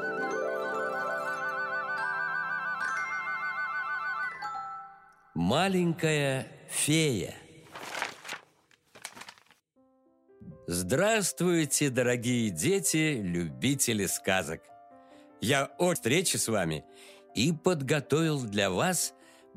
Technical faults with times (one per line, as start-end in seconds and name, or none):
15.95 damaged data in a compressed stream